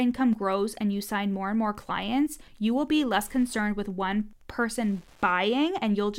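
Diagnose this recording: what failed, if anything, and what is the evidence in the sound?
The fault is Wi-Fi interference, picked up in the analogue wiring. A faint, steady ticking runs under the speech for the whole recording. It repeats every 102.4 ms, close to ten ticks a second. It sits around 40 dB below the speech, so it is easiest to hear in pauses. A nearby Wi-Fi radio transmits a beacon at that interval. The audio circuit rectifies each burst, turning it into a click.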